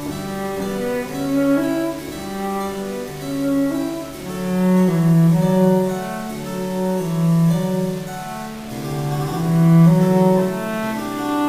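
Grainy, signal-following distortion throughout, likely low bit depth without dither at 6 bits, about 20 dB down; unlike steady hiss, quiet passages sputter or vanish.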